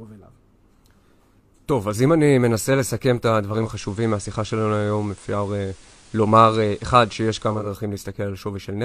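Digital radio blending to analogue, 3.48–7.74 s: losing digital, the receiver cross-faded in 309 ms to FM, adding faint hiss.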